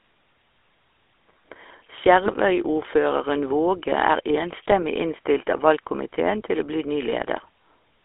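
Throughout, the speech carries GSM full-rate codec damage: the vocal tract is modelled and driven by sparse, regularly spaced pulses, giving a plainly audible buzzy, gravelly roughness. The band runs about 300 Hz to 3.5 kHz, consistent with a 13 kbps full-rate stream.

GSM bit errors occur from 2.26 to 2.34 s and again from 4.82 to 4.87 s. Corrupted filter, pitch or gain parameters reach the decoder, so those stretches break into short squawks and gargling, with the spectrum bent and the level momentarily jumping.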